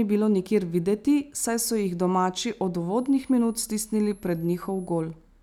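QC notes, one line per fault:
2.97–5.02 s, switching supply whistle: just after "so jih domači od", a thin high whistle appears and runs until shortly before the end of the clip. Its pitch wanders between about 9.8 and 11.6 kHz, centred near 10 kHz. It sits roughly 30 dB below the speech. This is a switching power supply slipping into an audible burst mode or beating with another supply. Its pitch drifts as the load it feeds changes.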